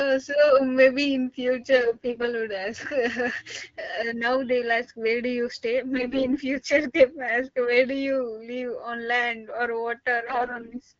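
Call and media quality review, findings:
AMR bit errors: hoarse, gargly speech at 1.76–2.28 s (after "so maybe in", before "would ask"), 5.96–6.38 s (after "where do you stay"), and 10.26–10.81 s, each time rougher. Pitch and level hold with no gaps, unlike frame loss. Corrupted low-protection bits misplace excitation pulses over clean AMR-WB, which fits 12.65 kbit/s.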